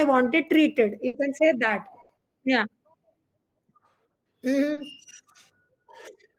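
A speech clip with two bursts of packet loss, at 1.07 to 1.15 s and 2.01 to 2.11 s. Each gap is bridged by the last sound held and faded, for 60 and 80 ms. Then speech resumes further on. At 4.73 s, short concealed packet loss leaves a 40 ms smear where the receiver extrapolated the missing audio and blended back.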